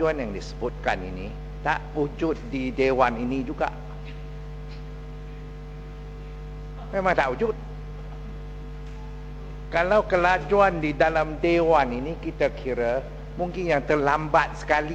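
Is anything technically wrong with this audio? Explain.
No, nothing technically wrong can be heard in this audio. It holds together steadily across its whole length with no faults to report.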